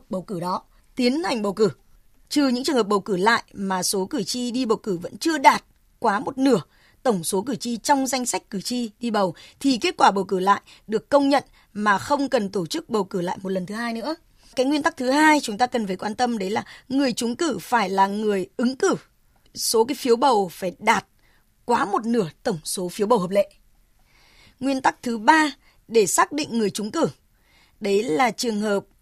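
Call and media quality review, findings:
Nothing to flag on this speech recording; no faults turned up anywhere in the call path.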